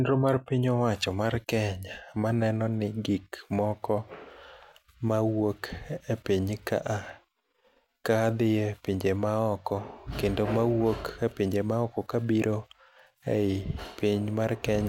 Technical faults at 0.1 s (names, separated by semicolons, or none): none